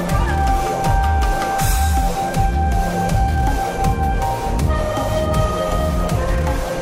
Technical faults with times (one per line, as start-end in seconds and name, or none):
none